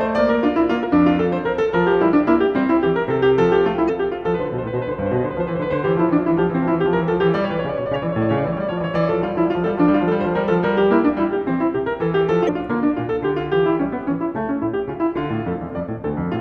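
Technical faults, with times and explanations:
0.80–0.84 s, 3.85–3.90 s, 7.94 s and 12.45–12.49 s: damaged data in a compressed stream. Each is a brief chirp, squawk, click or short hole in the music, lasting roughly 20 to 45 ms. Corrupted bytes in the compressed stream make the decoder misread those frames and lose sync. It then searches for the next valid frame header, so each is a short glitch.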